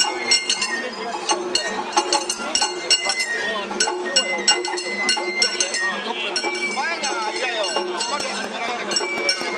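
Adaptive stream starting at a low bitrate, 0.0 to 4.0 s: the player begins on a lean version of the stream, and the opening sounds dull, with thin or synthetic treble and stronger codec smearing, which fits roughly 24 kbit/s Opus. At 4.0 s quality jumps, with no gap, to something nearer 64 kbit/s, once the connection has been gauged.

Train of clicks, 8.20 to 9.42 s: about seven near-identical pops arrive at a steady 4.1 per second, peaking roughly 15 dB above the sound and audible as ticking over it. Repeated pulses like this likely come from nearby electrical interference or a faulty connection or power supply.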